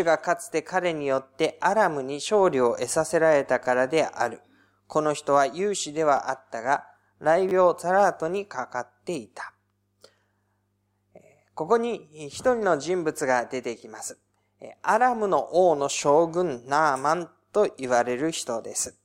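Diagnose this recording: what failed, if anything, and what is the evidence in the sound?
The driver or buffer stage failed to receive new audio in time on two occasions, and the device replayed its last block instead (a repeated buffer). At 6.17 s one short slice of speech plays twice. From 7.49 to 7.51 s a slice plays three times. Each repeat joins hard onto the one before. The repeated pieces are tiny, which fits a 10 ms buffer, so each event is heard as a click or brief buzz, and roughly 10 and 20 ms of fresh audio are skipped.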